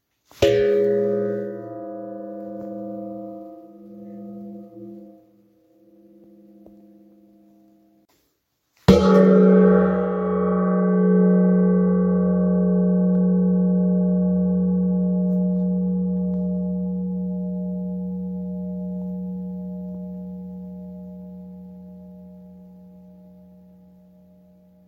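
Nothing goes wrong anywhere in this recording, so there's nothing here to point to or explain.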